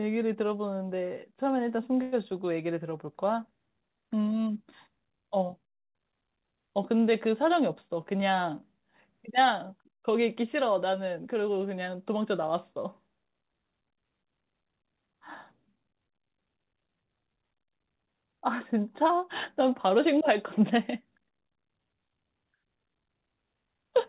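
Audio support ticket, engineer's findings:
2.02–2.14 s: short buzzy fill fading over about 0.1 s, then resumes where it stopped with nothing lost. Call audio freeze, likely delayed packets draining the jitter buffer.

7.42–8.14 s and 15.69–16.60 s: faster delivery at unchanged pitch, running 104% then 108% speed. Jitter buffer speed-up: pitch periods trimmed, roughly 40 ms and 70 ms, to shed excess delay.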